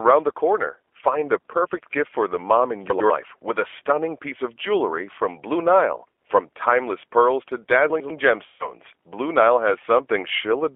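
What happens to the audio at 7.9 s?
Between 7.9 and 8.1 s you get chunks out of order. A 100 ms piece of audio lands one chunk late, so it plays after the piece that should follow it. Nothing's missing, but the sequence is swapped, and you hear a brief jumbled stutter across the three hard joins.

Underneath that, the whole thing carries G.729 codec damage. The sound is squeezed into a 300 Hz to 3.4 kHz telephone band and rebuilt from a filter-plus-pulse model, which fits an 8 kbit/s VoIP codec. That gives it a plainly rough, slightly synthetic edge.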